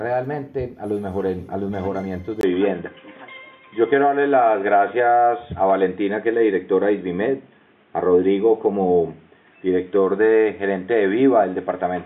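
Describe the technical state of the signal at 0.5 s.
At 0.5 s the signal is intact, with no audible dropout, distortion, noise burst or other fault at that moment.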